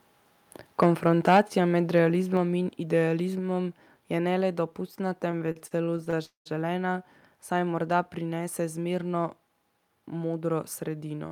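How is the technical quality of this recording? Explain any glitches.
The recording has several clear technical problems: distortion at the start, two level drops, and three timing disturbances later in the speech.

Microphone overload occurs at 0.82–0.86 s and again at 1.27–1.4 s. The loudest syllables carry a harsh, crackly edge because their waveform peaks run about 3 and 4 dB past the converter's limit and are flattened, so a noticeable share of samples sit pinned at the limit. The likely cause is input gain set too high. Unlike a codec artefact, the roughness follows loudness and appears only on the peaks.

Microphone volume stepped down at 1.37 s, right inside the second distorted peak, and again at 2.37 s. The level of the speech and the room noise together drops abruptly, by about 2 dB and then about 3 dB. The likely cause is the call software reacting to the clipping by lowering the input gain. 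What separates this from a speaker simply getting quieter is that the background falls by the same amount at the same instant.

Repeated stalls (stutter) run from 5.31 to 6.19 s, just after "je ne le dopustna". Eleven brief hitches, the longest about 36 ms, make the speech drag and catch. Each time, the receiver ran out of audio and stretched the last sound until packets arrived, adding roughly 0.2 s in total while dropping nothing. Because every pause is short and filled, this reads as stuttering rather than as dropouts.

A call audio freeze follows at 6.25–6.48 s. The sound hangs as a fading continuation of the last moment, then goes near-silent for about 130 ms before the speech resumes exactly where it stopped. The likely cause is packets held up in transit until the jitter buffer emptied, inserting about 0.2 s of delay. Unlike the stutter, this is a single long hold with an audible silent tail.

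A jitter buffer speed-up spans 9.74–10.45 s, right after "saj morda prinese zmerno". The speech plays at about 111% speed while its pitch stays the same, so it sounds rushed rather than chipmunk-like. The receiver was shedding excess buffered delay by removing many tiny pitch-period slices, about a tenth of a second in all. That pitch-preserving quickening is what distinguishes it from a sample-rate mismatch.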